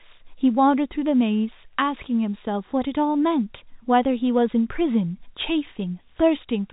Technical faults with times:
none

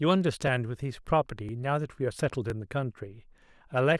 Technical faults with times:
0.47 overlapping chunks
1.49 overlapping chunks
2.50 overlapping chunks
3.51 overlapping chunks

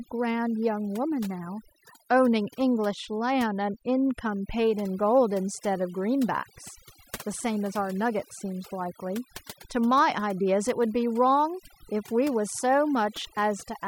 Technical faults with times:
0.00-13.88 overdone noise removal

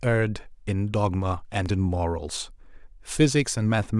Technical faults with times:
1.66 dropped samples

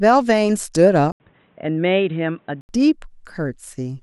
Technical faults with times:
1.12-2.69 input switched to a poorer device

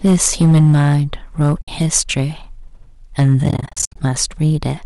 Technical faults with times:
0.00-4.85 hard clipping
1.61-1.68 AAC frame loss with muting
3.44-3.96 AAC frame loss with muting

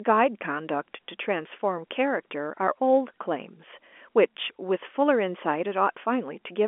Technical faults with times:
none

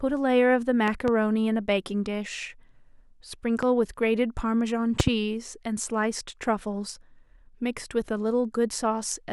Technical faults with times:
0.88-1.10 loud pop
3.63-3.65 loud pop
5.00-5.10 loud pop

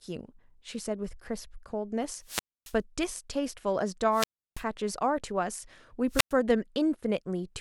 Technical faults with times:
2.22-2.77 wireless microphone squelch dropout
4.11-4.64 wireless microphone squelch dropout
6.09-6.34 wireless microphone squelch dropout

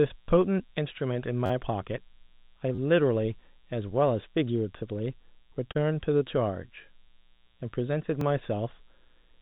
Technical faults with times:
0.00-9.41 mains buzz
1.46-1.50 repeated buffer
2.75-2.78 repeated buffer
5.71-5.77 short concealed packet loss
8.21 repeated buffer

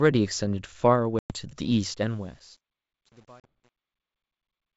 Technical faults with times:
1.19-1.35 packet loss on an ADPCM call
1.91-4.77 truncation distortion on a fade
3.40-3.47 packet loss on an ADPCM call

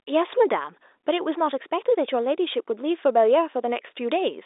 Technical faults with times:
none

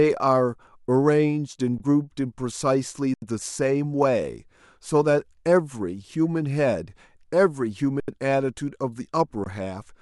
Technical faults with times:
1.78-1.80 underrun with held sample
3.14-3.22 underrun with held sample
8.00-8.08 underrun with held sample
9.44-9.46 underrun with held sample

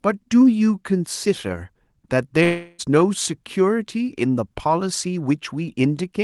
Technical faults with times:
2.43-2.81 long network dropout

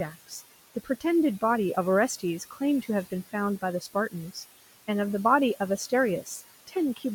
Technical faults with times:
0.00-7.14 noise suppressor artifacts
0.12-0.41 speech cut by the noise suppressor
0.75-1.03 speech cut by the noise suppressor
2.39-2.61 speech cut by the noise suppressor
6.67-6.76 speech cut by the noise suppressor

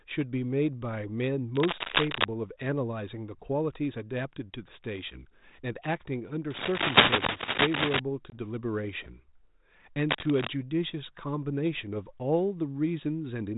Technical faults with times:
1.55-2.25 cable scratch noise
6.50-8.00 cable scratch noise
8.30-8.35 packet loss on an ADPCM call
10.09-10.48 cable scratch noise

